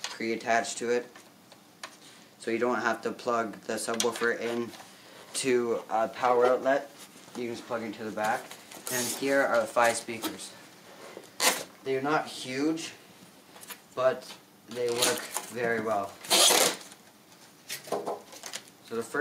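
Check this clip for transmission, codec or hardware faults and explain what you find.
No transmission, codec or hardware problems can be heard anywhere in the recording; the signal stays continuous and stable throughout.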